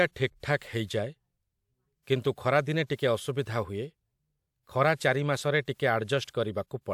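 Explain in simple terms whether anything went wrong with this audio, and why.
Pre-echo smears sharp speech onsets at 0.58–0.61 s, at 2.86–2.90 and 2.96–2.99 s after "କିନ୍ତୁ ଖରାଦିନେ", and at 5.66 s after "ଖରା ଚାରି ମାସରେ". The codec spread its noise ahead of each attack, leaving brief hiss beforehand.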